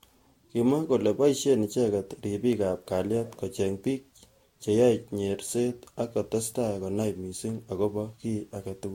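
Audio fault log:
throughout: generation loss. The speech sounds swirly, hollow and smeared, with blurred consonant attacks and nothing above 16.6 kHz. This likely comes from about four rounds of lossy re-encoding, each requantising on a shifted frame grid, so noise and spectral holes accumulate.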